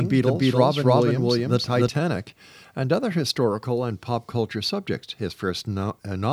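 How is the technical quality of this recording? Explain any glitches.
One glitch stands out in this speech recording. From the very start until 1.88 s, a doubled audio track is audible. A second copy runs about a third of a second behind, at roughly equal level. It is likely a slower capture path or misaligned edit. The echo sounds dry, then stops abruptly.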